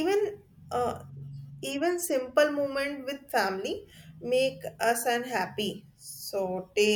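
Nothing stood out on listening to this speech recording.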